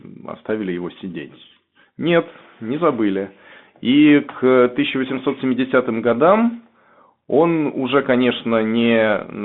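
A Bluetooth CVSD headset codec affects the speech throughout. The codec sends one bit per sample, each only saying up or down, with an adapting step size. That fits a 64 kbps link. The line passes roughly 150 Hz to 3.6 kHz, so the speech sounds thin and boxed in. The damage is plainly audible: loud high passages outrun the step and distort, s sounds turn scratchy, and a granular hiss sits beneath the speech.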